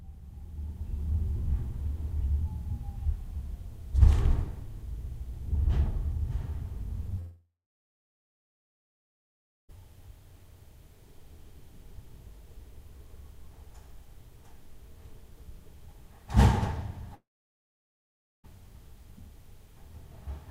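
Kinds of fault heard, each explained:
Long network dropout: the sound cuts out at 7.19 s for about 2.5 s and at 17.15 s for about 1.3 s. It trails off briefly, goes silent, then resumes with that stretch skipped, likely from packets not arriving.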